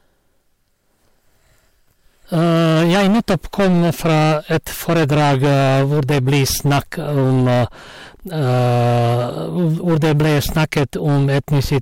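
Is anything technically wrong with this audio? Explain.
Yes. Throughout the clip, the speech is driven about 15 dB past what a stage can pass, so hard clipping flattens roughly a fifth of the waveform, producing harsh fuzz on every loud syllable.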